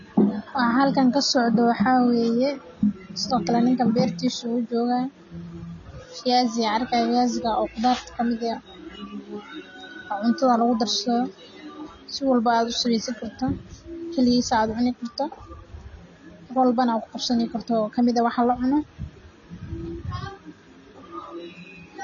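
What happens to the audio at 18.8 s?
At 18.8 s the speech carries the same AAC compression damage heard across the whole clip. The sound is dull and smeared, with a watery, warbling texture on held sounds and a fizzy edge on sibilants, likely from an AAC-LC encode at a low bitrate around 24 kbps. To save bits, the encoder discards everything above about 6.9 kHz. On a spectrogram this shows as a flat ceiling at 6.9 kHz.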